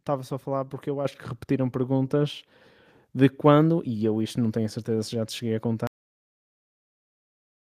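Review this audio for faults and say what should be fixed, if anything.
At 1.05 s the microphone volume steps up by about 6 dB in one jump: voice and room tone rise together, which is the call software raising the device's input gain. Fix it by disabling automatic mic gain adjustment and setting the level once beforehand.

There's also a cut-off end at 5.87 s, where the sound stops abruptly into digital silence with no natural decay, so the final buffers were never written out. Make sure the recorder flushes and closes the file properly before stopping.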